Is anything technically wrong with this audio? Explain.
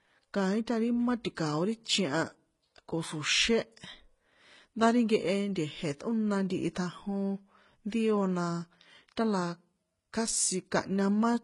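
Yes. Throughout, the speech likely went through transcoding between lossy codecs, roughly a low-rate Vorbis then HE-AAC stage. It has nothing above 12.3 kHz, and two kinds of smearing and swirl sit together, unlike a single codec's uniform artefacts.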